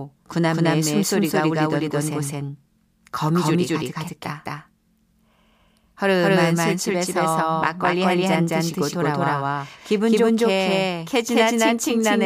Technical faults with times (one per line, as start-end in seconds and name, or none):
0.00-12.26 doubled audio track